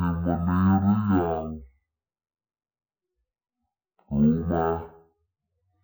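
Stereo read as mono runs from start to finish. The left and right samples, stored alternately, have been taken as one continuous channel, so each stereo frame becomes two consecutive mono samples. The speech is stretched to half speed and pitched a full octave, 12 semitones, below normal, giving a slow, deep, dragging delivery. A fainter mirrored copy of the sound sits in the upper half of the spectrum, heard as a thin, hazy overlay above the lowered speech.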